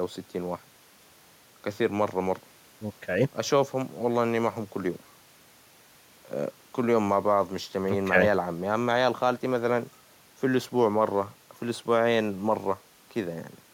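No technical faults can be heard in this speech recording.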